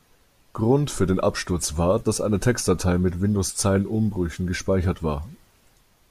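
Nothing in the recording stood out as a technical problem on listening.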